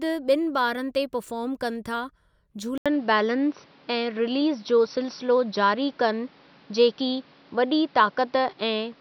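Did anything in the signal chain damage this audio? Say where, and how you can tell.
Yes. At 2.78 s the speech drops out for 80 ms, then stays dull and boxy to the end, with nothing above 5.9 kHz, a level shift of around 5 dB and new noise roughly 35 dB down. Likely cause: input switched to a poorer device at the driver stage.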